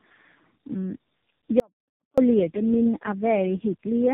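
From start to finish there's tandem speech coding: rough, muffled and warbly, nothing above 3.8 kHz, which fits about three narrowband codecs stacked, each recoding the last one's damage. From 1.60 to 2.18 s there's an audio dropout to a faint residue, a sudden gap of about 0.58 s with only a trace left, roughly 35 dB down, likely the signal lost while the path stayed live.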